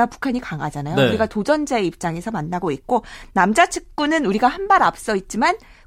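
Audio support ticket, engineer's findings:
No audible faults found on the speech clip; no symptom to attribute to any component.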